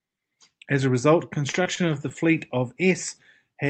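Right after "a result", from 1.51 to 2.12 s, the speech turns choppy: repeated packet loss. Four short holes open up, the longest about 20 ms, and each is bridged by stretching the preceding sound, so about 72 ms of the span is patched over. Unlike a single dropout, the stutter recurs through the whole stretch, giving choppy sound with pieces missing rather than one clean break. The call path, likely Opus with its band limit near 8 kHz, carries it through.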